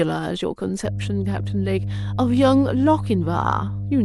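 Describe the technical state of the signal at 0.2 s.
At 0.2 s the speech signal is intact, with no technical fault present at that moment.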